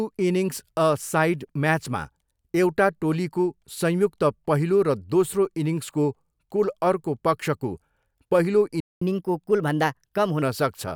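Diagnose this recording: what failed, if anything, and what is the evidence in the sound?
The speech drops to silence from 8.80 to 9.02 s. This is a 0.21 s playback stall at the playback stage, likely the player's buffer running dry.

From 9.02 to 10.42 s the speech sounds hurried and sharp. This is catch-up at higher speed: resampling at 1.15x raises pitch about two semitones to recover lost time.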